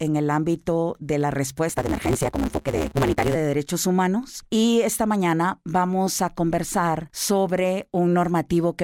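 A speech recording, where just after "el ámbito de la" a steady 150 Hz buzz appears from 1.69 to 3.36 s, and the speech rushes forward about 1.6 times faster while keeping roughly its normal pitch. That is a block size mismatch (truncated): one stage hands over longer blocks than the next stage takes in, so the tail of each block is discarded. The buzz is that chopping at the block rate, and the speed-up fits 512-sample blocks being cut short by that ratio.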